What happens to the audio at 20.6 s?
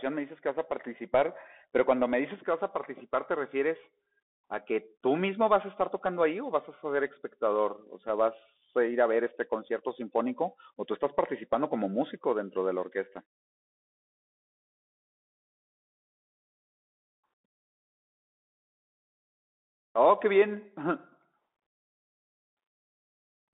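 At 20.57 s there is a single sharp click, likely from dropped samples: a fraction of a millisecond of the stream goes missing, so the waveform jumps abruptly to a later value. Underneath, the Bluetooth CVSD headset codec is still plainly audible. It squeezes the speech into roughly 250 Hz to 3.6 kHz, with nothing above 3.8 kHz, and its one-bit adaptive steps leave scratchy sibilants over a granular hiss.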